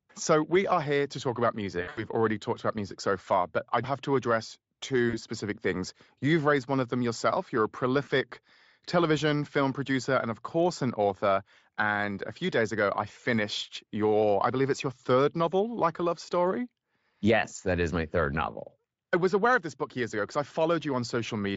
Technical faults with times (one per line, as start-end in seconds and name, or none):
1.81-2.04 VoIP packet loss concealed by the speech codec
5.09-5.19 VoIP packet loss concealed by the speech codec
8.03-8.09 VoIP packet loss concealed by the speech codec